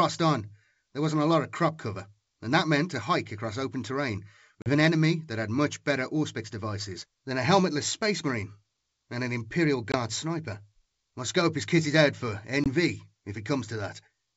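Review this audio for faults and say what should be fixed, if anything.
Three abrupt, hard-edged dropouts occur at 4.62–4.71 s, 9.92–9.96 s and 12.64–12.67 s. Each ends with a short stretch of slightly distorted sound. This is packet loss on an ADPCM call. About 40 ms, roughly a couple of packets, went missing at the first point and 20 ms, likely a single packet, at each of the others. The gaps were filled with silence, and the receiver's adaptive predictor and step size drifted from the sender's until they caught up again. Packet loss concealment that also resets the decoder's state, together with adequate jitter buffering or redundant transmission, would prevent these dropouts.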